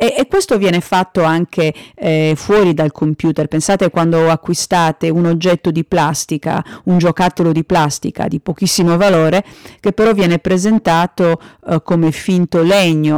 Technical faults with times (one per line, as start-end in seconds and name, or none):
0.00-13.18 hard clipping